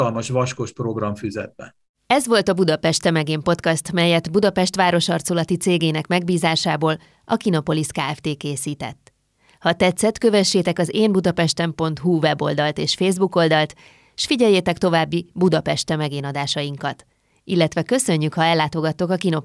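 No technical faults occur at any point in the speech, so there is nothing to describe in time order.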